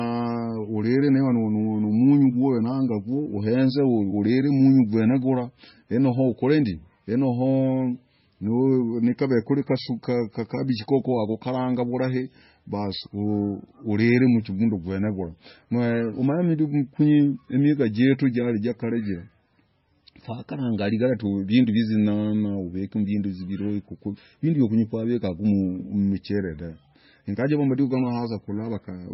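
Throughout, nothing sounds above 5.6 kHz and the speech turns watery and swirling as weak components flicker between frames, unlike plain low-pass filtering, likely heavy MP3 compression.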